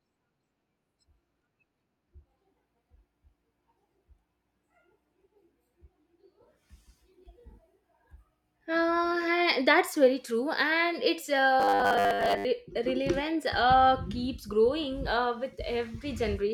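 From 11.60 to 12.45 s the speech turns into robotic sound from repeated short buffers: a rigid, metallic buzz fixed at 100 Hz that loosely tracks the syllables. The likely cause is audio arriving too late, so playback keeps looping the last fragment of about 10 ms, matching the 100 Hz buzz, while the incoming speech is dropped. Across most of that stretch, roughly seven tenths, the sound is repeated material rather than new audio.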